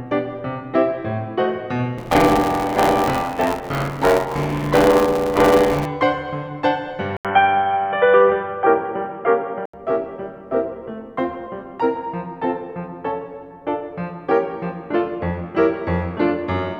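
From 1.97 s to 5.86 s the music takes on buffer tearing. The software filling the playback buffer and the hardware reading it have drifted out of step. They now cross inside every period. Roughly 40 percent of each buffer replays audio from about 40 ms earlier, with hard joins on either side. The result is a steady robotic buzz at 86.1 Hz, which fits a 512-sample buffer. It rides on the music throughout.

At 7.17 s the sound drops out for 80 ms. Then it returns dull and boxy, with a narrower band. The level shifts by about 5 dB. A new noise floor appears, roughly 50 dB below the music. This is an input switched to a poorer device, likely a change to another microphone or a headset's call profile mid-recording. The narrow, boxy tone lasts until 9.74 s.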